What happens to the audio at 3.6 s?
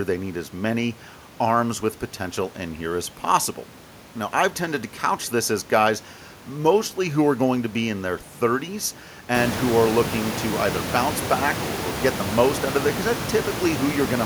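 Nothing goes wrong at 3.6 s; the speech there plays through cleanly with no dropout, click or distortion.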